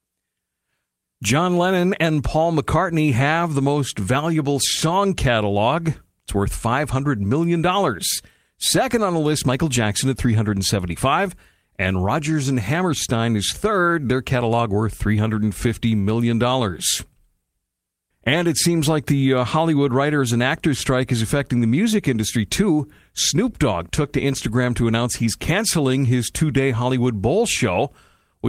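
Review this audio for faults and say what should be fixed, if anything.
Nothing here needs fixing: I listened all the way through this speech recording and didn't hear any faults at any point.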